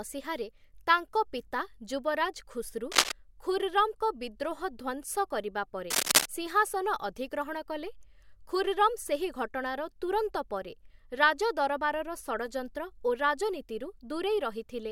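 A worn cable, connector or control being disturbed is the likely culprit here: as it moves, its contact resistance jumps about rapidly, injecting dense, irregular noise into the speech path. The result is cable scratch noise, heard twice, from 2.92 to 3.12 s and again from 5.90 to 6.26 s. Each time a rough scratching, rustling burst sits on top of the speech, a little louder than the speech itself, before cutting away.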